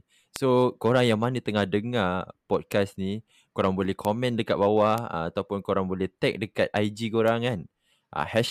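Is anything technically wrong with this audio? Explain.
Yes. The speech carries five bit error spikes, at 0.36 s (just before "korang yang mana tengah"), 2.72 s (after "yang mana tengah dengar"), 4.05 s (after "ni korang boleh"), 4.98 s and 7.28 s. Each is a single flipped bit that throws one sample, or at 0.36 s a brief run, to a power-of-two offset before it snaps back. They peak around -7 dBFS, the last around -13 dBFS, and sound like isolated broadband ticks unrelated to the speech.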